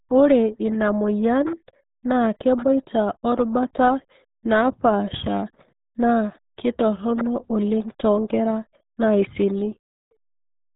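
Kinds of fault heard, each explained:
RealAudio 14.4 codec: the speech passed through a very low-rate dial-up codec, consistent with an 8 kbit/s stream, which throws away everything above 3.8 kHz and crudely models the rest, leaving the speech dull, muffled and heavily gargled from start to finish.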